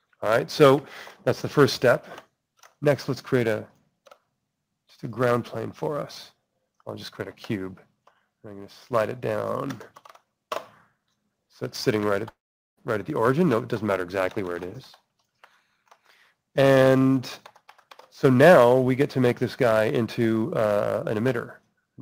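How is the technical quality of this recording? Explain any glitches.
The recording has one clear glitch, a long network dropout between 12.29 and 12.79 s. The likely cause is that the audio stream stopped arriving for about half a second, so the receiver had nothing to play and improvised. The last sound trails on briefly as a fading buzz, then about 430 ms of near-silence follows. Playback resumes around 12.79 s, and roughly 480 ms of the original sound is simply gone.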